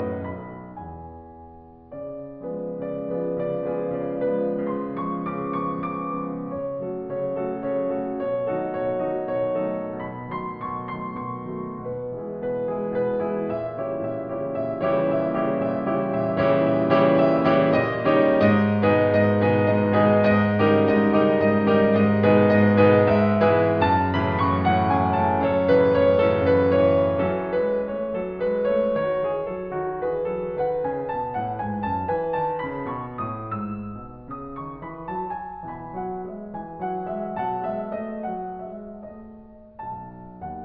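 No technical faults can be heard anywhere in the music, so there is nothing to place in time order.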